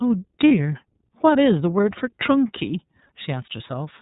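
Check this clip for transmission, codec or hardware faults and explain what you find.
Two faults are present: iLBC codec coding throughout, and one lost iLBC frame near the start.

Throughout the speech, an iLBC codec squeezes the signal into narrowband, coding each frame's excitation on its own, consistent with 30 ms frames at 13.33 kbps. Nothing above 4 kHz survives, so the speech sounds muffled and plainly rough and synthetic.

From 0.48 to 0.51 s, a 30 ms gap points to a single lost iLBC frame. The decoder fills it by repeating the last pitch cycle blended with noise, so a brief buzzy, held vowel sound is heard before clean speech resumes almost immediately.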